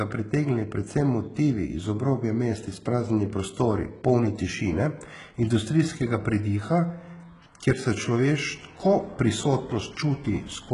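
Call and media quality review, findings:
HE-AAC compression, heavy, throughout. Treble above the core is synthetic, s sounds gritty and metallic, nothing above 11.1 kHz. Likely spectral band replication at a very low bitrate, around 12 kbps. Unlike a plain low-pass, the top end remains bright but mismatched.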